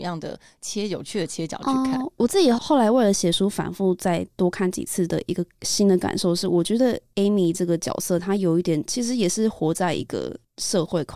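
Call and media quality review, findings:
No faults found in the speech clip. Nothing to log against any component in the call or media chain.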